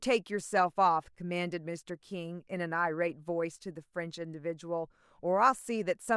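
Nothing in this speech recording stands out as a technical fault, so there's nothing here to point to at any moment.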